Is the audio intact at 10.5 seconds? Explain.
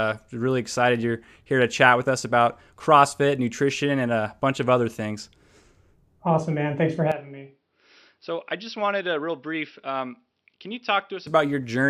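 No. From 7.12 s to 11.27 s the speech sounds as if the input switched to a poorer device, likely a mid-recording change of microphone. Nothing above 5.7 kHz survives, the level falls by roughly 10 dB, and a faint new background noise appears, with no gap at the switch.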